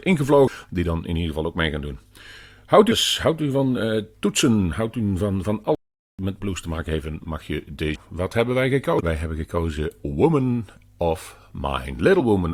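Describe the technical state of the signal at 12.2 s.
Damaged data in the compressed stream corrupts the frames between 12.19 and 12.21 s. The decoder misreads them, loses sync and hunts for the next valid frame header, so the speech is interrupted by a short, harsh digital chirp or blip lasting about 20 ms.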